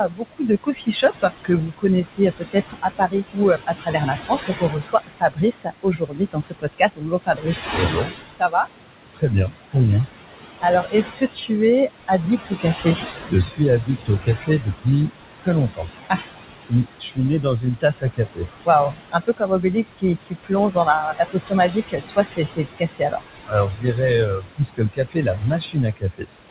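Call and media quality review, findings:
Noise suppressor artifacts, whole clip. Room noise ducked by about 18 dB between phrases, swelling back under speech. Probable component: noise suppressor. Mechanism: per-frame band gains tracking an estimated steady floor. The room noise sits only about 9 dB below speech. Audio band-limited near 4 kHz, consistent with a narrowband G.711 call path.

Speech cut by the noise suppressor, four spans. 0.08 to 8.67 s: roughly 4 s total swallowed, dips to about 21 dB. 9.14 to 9.76 s: about a fifth of a second faint, about 21 dB. 10.61 to 11.51 s: about 0.3 s, shallower, about 14 dB. 12.08 s to end: recurring, up to about 21 dB. Probable component: noise suppressor. Mechanism: soft consonants and word endings misclassified as noise and attenuated with the background.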